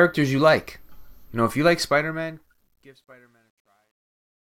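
From 1.80 s, just after "know if you like", the fade-out that runs from 1.80 s to the end at 4.51 s suffers truncation distortion on a fade. The gain stage drops low-order bits without dither, which fits roughly an 11-bit word, so the decaying waveform collapses into coarse square steps. The effect is worst from 2.68 s to 4.51 s, where the tail turns gritty.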